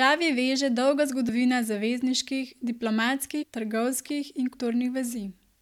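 Compressed frames get skipped at 1.28 s, 3.42 to 3.44 s and 4.53 s. The speech jumps ahead by about 70, 150 and 100 ms.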